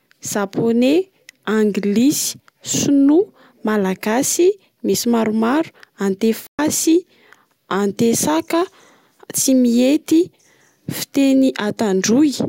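At 6.47 s the speech cuts out abruptly and the line stays silent for 120 ms, until 6.59 s, before carrying on. This playback stall likely came from the player running short of buffered data or having its output thread blocked.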